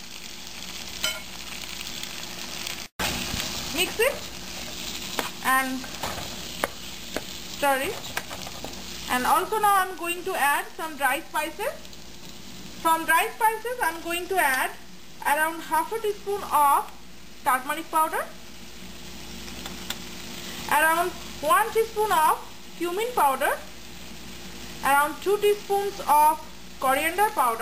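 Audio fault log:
No faults are heard anywhere in this clip. There is nothing to log for any time range.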